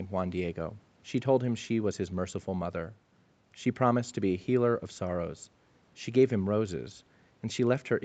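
There are no technical faults to describe in time order. The speech simply carries the normal band limit of a call, with nothing above 8 kHz.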